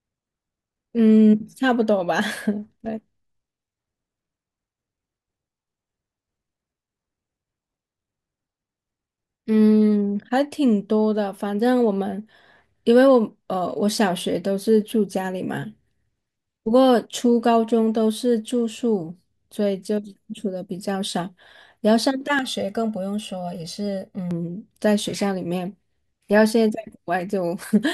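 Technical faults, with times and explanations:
22.39 to 24.31 s, channel delay (comb filtering): For about two seconds the speech turns hollow and phasey, then clears. One channel arrives late by roughly a millisecond and a half. When the two channels sum to mono, the shared sound cancels at regular frequencies. The lowest notch sits near 300 Hz, and further notches repeat evenly above it. These fixed gaps in the spectrum thin the voice and give it a tubey quality.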